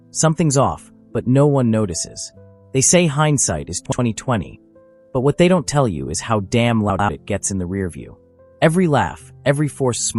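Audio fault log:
3.86–3.99 s and 6.90–7.09 s, frames out of order: a brief garbled flutter. Neighbouring runs of frames were decoded swapped, exchanging halves of 64 ms and 96 ms. This points to two and three 32 ms frames per half. No time is lost.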